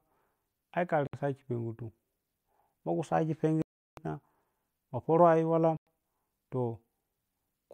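The speech cuts to silence three times, at 1.07 s for 64 ms, at 3.62 s for 354 ms and at 5.77 s for 98 ms, then resumes where it stopped. That points to a Bluetooth stall, likely the headphones' buffer running dry.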